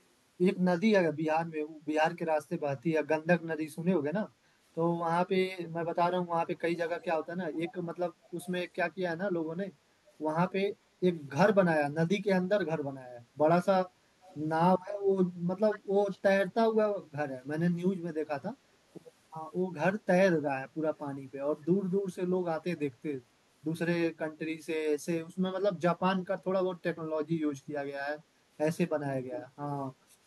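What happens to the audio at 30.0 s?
Around 30.0 s the speech plays through intact, with no dropout, click, distortion or other fault at that point.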